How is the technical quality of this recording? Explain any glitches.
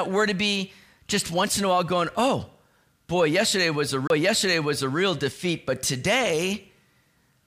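The recording has one clear glitch, a CD skip at 4.07 to 4.10 s, just before "defeat but today". The playback briefly mutes for roughly 30 ms, then resumes at a different point in the speech. A physical knock or disc flaw made the pickup laser jump to another turn of the spiral track, so the audio jumps by a whole number of disc revolutions instead of continuing smoothly.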